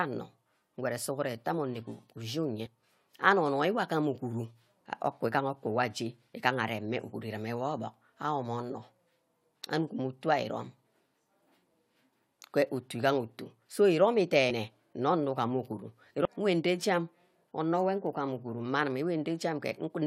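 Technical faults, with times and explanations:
2.65 s and 14.49–14.51 s, damaged data in a compressed stream: two brief blips in the speech, the second just after "so iromi". Corrupted bytes in the encoded stream make the decoder misread those frames and lose sync until it finds the next valid frame header.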